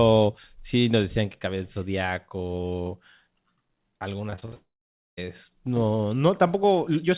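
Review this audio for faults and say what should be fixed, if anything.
Packets were lost or arrived late over and over from 4.30 to 4.54 s: repeated packet loss with robotic sound. Four separate gaps fall in that quarter-second, the longest 62 ms, and the receiver covered each one by stretching the previous bit of speech. Roughly half the span is patched rather than real, so the speech turns choppy, with about 120 ms of it simply missing. A larger jitter buffer, forward error correction or a cleaner network route would prevent this.

Straight after, from 4.54 to 5.19 s, comes a long network dropout. Its likely cause is the stream stopping entirely for about 640 ms. The speech is first drawn out into a brief fading buzz, then falls to silence for roughly half a second before returning with that stretch gone. Since this follows the burst of loss, it points to a link stalling rather than random packet drops. 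Monitoring link stability and falling back to redundant or retransmitted audio would prevent it.

Through the G.711 mu-law call path the audio has nothing above 4 kHz.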